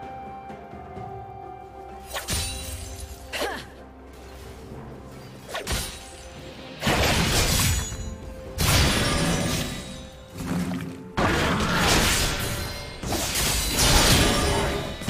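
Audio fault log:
Nothing stood out on listening.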